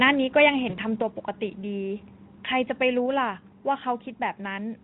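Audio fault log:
0.36–0.49 s, microphone overload: For about 0.13 s the loudest peaks run flat against the converter's limit, driven roughly 5 dB past full scale, with around one sample in twenty sheared off. That flattening adds a harsh, crackling edge. It tracks the signal's own peaks rather than arriving as isolated clicks, which separates it from dropouts or digital glitches. The likely cause is input gain set too high before conversion, not the light Speex coding at 15 kbps.
0.69–0.77 s, VoIP packet loss concealed by the speech codec: About 40 ms of audio goes missing, which fits two lost 20 ms frames. Instead of a hard gap or silence, the decoder keeps extending its last pitch and spectral shape and steps the gain down, so the sound smears into a fading buzzy, coloured tone. Because each concealed frame feeds the next, the sound stays thin and distorted briefly after data returns. 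A simple dropout or mute would not leave that lingering tail.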